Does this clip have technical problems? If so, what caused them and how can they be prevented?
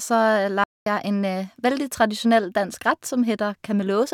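Yes. The speech drops to silence from 0.64 to 0.86 s, about 224 ms, then resumes at "en veldig tradisjonell dansk"; this is likely a playback stall, with the player starved of data or its thread blocked. A larger playback buffer and a high-priority audio thread would prevent it.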